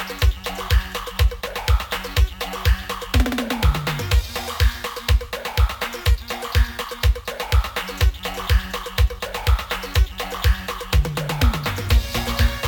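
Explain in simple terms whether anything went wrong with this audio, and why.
Nothing went wrong here; no technical faults turn up anywhere in the audio.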